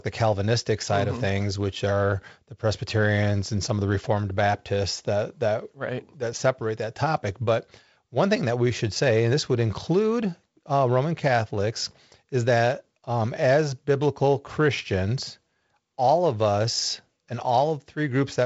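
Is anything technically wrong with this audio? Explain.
No, nothing in this speech clip is technically wrong. It carries the sound of G.722 wideband telephone coding at 48 kbit/s, with nothing above about 7.7 kHz and only light coding texture from the reduced bit allocation.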